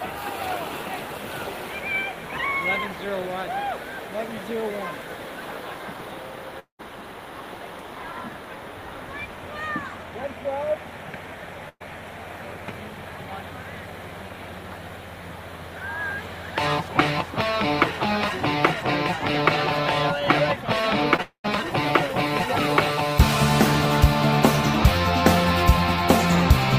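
At 6.59 s the audio breaks for about 0.2 s, until 6.81 s. The last sound carries on as a fading buzz or hiss, then about 120 ms of near silence follows. The audio returns further on. This is likely a long network dropout.

At 11.69 s a burst of packet loss removes about 120 ms, ending at 11.82 s. The receiver stretches the final sound and turns it down. About 50 ms goes silent before the audio resumes with that stretch gone.

From 21.16 to 21.20 s comes a short concealed packet loss. Some 20 ms arrived too late. The decoder patched it by extending the preceding sound, then blended back. It is heard as a brief smear.

Right after, from 21.22 to 21.46 s, what is likely a second long network dropout takes about 220 ms. A fading continuation fills the start, then roughly 100 ms of silence. The audio comes back later, without the lost part.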